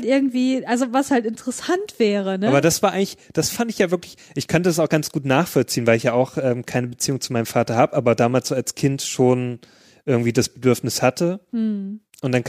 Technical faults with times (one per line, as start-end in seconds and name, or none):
none